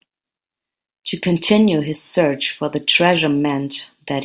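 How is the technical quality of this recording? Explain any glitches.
Nothing to flag here: the speech comes across without any glitches at any point, so there's nothing to explain.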